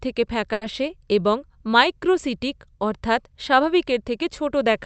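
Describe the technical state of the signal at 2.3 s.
At 2.3 s the speech comes through intact, with no dropout, glitch or other fault, only the ordinary character of the WebRTC call path it travels over.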